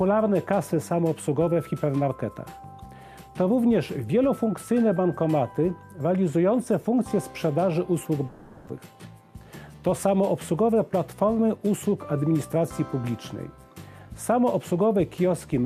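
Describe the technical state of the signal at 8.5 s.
At 8.5 s the audio sits inside a long network dropout, likely, running from 8.27 to 8.70 s. About 400 ms is missing, filled by the last sound stretched into a fading buzz that never reaches silence. A spectrogram shows frozen, smeared bands dimming, then an abrupt resumption.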